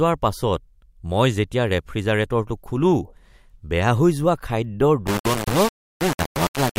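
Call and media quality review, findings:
Low bit depth without dither, 5.07 s to end (6.78 s), right after "হৈ যোৱা খাদ্যৰ". Speech turns harsh and grainy, with the error only about 10 dB below the signal. Likely an undithered requantisation stage rounding to 3 bits. Unlike steady dither hiss, the grit follows the speech and drops away in pauses.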